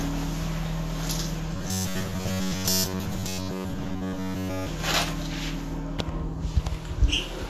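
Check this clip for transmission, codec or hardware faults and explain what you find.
Two faults are audible: lossy compression across the whole clip, and a robotic buzz in the middle section.

Throughout, the sound is grainy and hissy, with smeared attacks and roughened tones. This is likely Vorbis compression at a low setting, around 34 kbps. The encoder keeps a smooth spectral envelope and quantises the treble so coarsely that fine detail becomes noise-like texture. A spectrogram shows a hard ceiling with nothing above 14.1 kHz, and blotchy, speckled energy beneath it.

From 1.55 to 4.69 s, the audio turns rigid and metallic, a steady buzz at 93.8 Hz that still loosely follows the underlying sound. This is robotic sound from repeated short buffers, likely caused by audio arriving too late. The playback repeats the last fragment of about 10.7 ms while most of the real audio in that stretch is skipped. 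On a waveform the same short shape repeats like a comb. A spectrogram shows evenly spaced harmonics at 93.8 Hz multiples.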